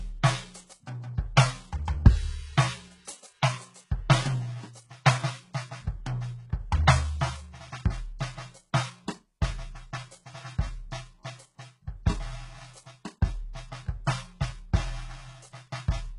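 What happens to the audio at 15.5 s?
At 15.5 s, as throughout, heavy HE-AAC compression, likely at a bitrate near 12 kbps, rebuilds the treble from copied lower bands, leaving gritty, metallic highs that stop at 11.1 kHz.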